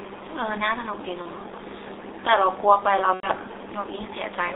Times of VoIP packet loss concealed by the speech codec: 1.22-1.29, 3.14-3.29

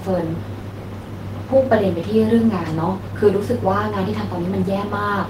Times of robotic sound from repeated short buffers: none

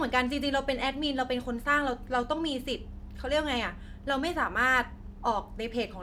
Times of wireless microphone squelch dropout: none

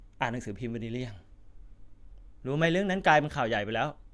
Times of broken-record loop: none

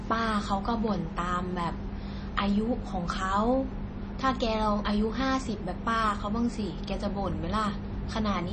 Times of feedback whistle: none

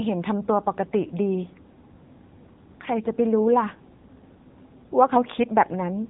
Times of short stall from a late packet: none

